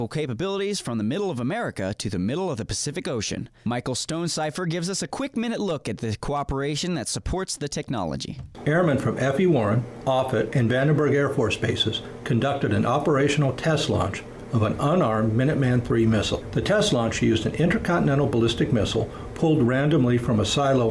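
No technical faults can be heard anywhere in this clip.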